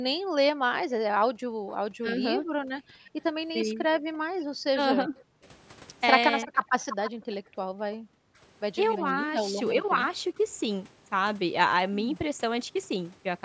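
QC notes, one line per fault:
0.18–5.45 s and 7.4–8.05 s, background gated by the echo canceller. The room sound drops away in short dips and then returns. The first span loses about 1.5 s in total, falling as far as about 40 dB. The second loses roughly 0.3 s, down about 32 dB. The canceller heard the far side on the loudspeaker and pulled the microphone down hard. It released when that playback stopped.
2.01–6.52 s and 8.33–10.4 s, speech suppressed in double talk. The voice dips and thins in brief pieces. The first span totals under a second with drops of around 15 dB. The second is a few short moments with drops of around 25 dB. Both sides were likely talking at once. The canceller could not tell the near talker from loudspeaker echo, so it turned everything down together.
3.59–4.44 s and 6.42–9.01 s, echo leak. A delayed copy of the voice trails the original by 336 ms. It is faint in the first span, about 20 dB under the speech. 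In the longer second span it is much clearer, about 10 dB under. This is likely a loudspeaker call whose canceller failed to strip all of the pickup, so the remainder was sent back as echo.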